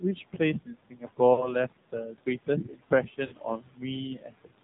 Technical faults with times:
0.00-4.63 noise suppressor artifacts
0.00-4.63 AMR narrowband mobile codec
0.01-0.40 speech cut by the noise suppressor
0.65-1.19 speech cut by the noise suppressor
1.34-1.55 lost AMR speech frames
2.64-2.92 speech cut by the noise suppressor
3.26-3.34 lost AMR speech frames
4.16-4.63 speech cut by the noise suppressor

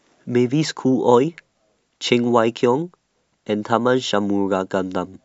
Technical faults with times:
none

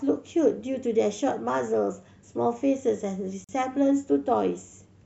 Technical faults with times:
3.44-3.49 gap at a join of encoded pieces

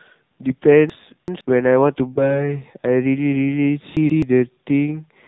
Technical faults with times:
0.00-5.27 AMR narrowband mobile codec
0.90-1.41 chunks out of order
2.14-2.46 lost AMR speech frames
3.97-4.22 chunks out of order

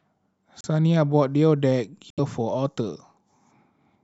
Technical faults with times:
0.61-0.65 Bluetooth stall
2.10-2.20 Bluetooth stall

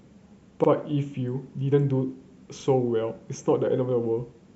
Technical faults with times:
0.64-0.68 repeated buffer
2.60-2.65 repeated buffer

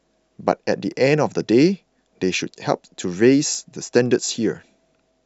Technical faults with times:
0.92-4.86 clock drift buffer slips

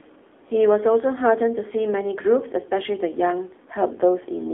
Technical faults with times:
0.00-4.53 AMR narrowband mobile codec

